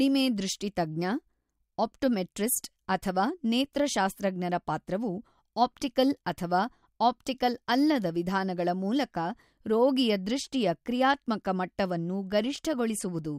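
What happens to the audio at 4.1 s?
Nothing goes wrong at 4.1 s; the speech continues there intact, with no dropout, click, distortion or other fault.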